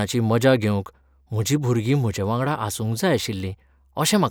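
No technical faults can be heard anywhere in the recording. There is no moment where the sound breaks, jumps or changes character.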